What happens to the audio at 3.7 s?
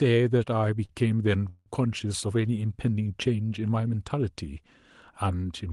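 Nothing goes wrong at 3.7 s: the speech there comes through intact, with only the ordinary band-limited character of an Opus call path and no dropout, glitch or distortion at that moment.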